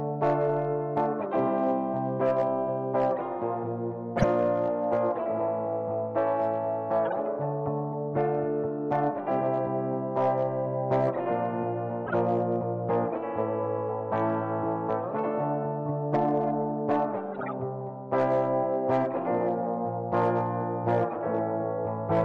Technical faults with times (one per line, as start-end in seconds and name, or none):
0.00-22.25 MP3 compression
4.18-4.24 corrupt frame decoded
7.05-7.13 corrupt frame decoded
12.07-12.14 corrupt frame decoded
17.34-17.53 corrupt frame decoded